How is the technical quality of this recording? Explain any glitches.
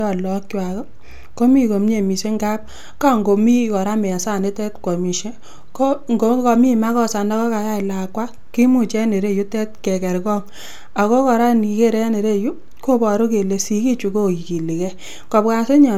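The quality is degraded throughout by what sounds like generation loss. The speech is swirly, smeared and hollow, with blurred consonant attacks, and nothing above 20 kHz. That likely comes from MP3 coding repeated a few times, each re-encode stacking fresh quantisation noise. Unlike a single low-bitrate pass, which this, nearer 128 kbit/s, isn't, the smearing exceeds what the bandwidth suggests.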